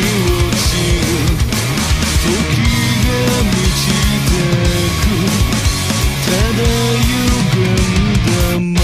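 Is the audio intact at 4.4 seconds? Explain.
Yes, the audio at 4.4 seconds is intact, with no dropout, click, distortion or other fault at that point.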